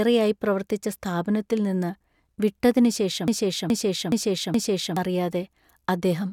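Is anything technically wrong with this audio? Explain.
Yes. From 3.28 to 4.97 s, right after "പ്രവർത്തിച്ച സ്ഥാപനത്തിൽ നിന്ന് വിട്ടതിനുശേഷം", there is a broken-record loop. One 0.42 s fragment repeats four times, identical and back to back, and the speech meant for that stretch is lost. The likely cause is a stalled player or stream resending its last fragment. Unlike echo, the repeats never fade or overlap.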